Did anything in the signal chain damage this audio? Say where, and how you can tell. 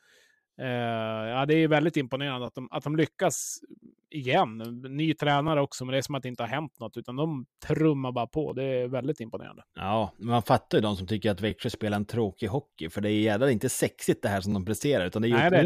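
Yes. The speech has overlapping chunks, introduced at the buffer or chunked-processing stage. A brief click-like stutter recurs at 2.47, 5.48, 8.50, 11.51 and 14.52 s, about 3 s apart. One falls just before "också men det är", another right after "de trummar bara på", and another between "de som tycker att" and "spelar en tråkig hockey". Each 3 s block begins about 13 ms before the previous one ends, so that sliver plays twice at every join.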